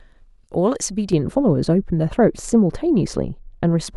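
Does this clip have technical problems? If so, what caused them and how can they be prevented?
Yes. From 1.13 s to the end of the speech, de-emphasis applied wrongly dulls and muffles the sound. A treble-cut filter meant to reverse pre-emphasis was used on audio that had none, or was applied a second time, so the response slopes smoothly downward, about 11 dB lower at 10 kHz than at 1 kHz. On a spectrogram the upper bands are weaker from 1.13 s onward. Prevention: track whether pre-emphasis was applied and de-emphasise exactly once.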